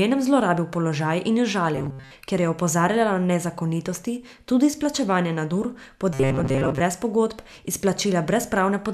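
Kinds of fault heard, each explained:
Robotic sound from repeated short buffers: the speech goes stiff and metallic, with a buzz fixed at 134 Hz from 1.75 to 2.11 s and 6.14 to 6.81 s, likely from late audio being covered by looping a 7.5 ms slice for most of each stretch.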